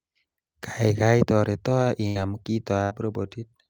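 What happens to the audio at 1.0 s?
Nothing goes wrong at 1.0 s: the speech runs through that moment intact, with no dropout, click or distortion.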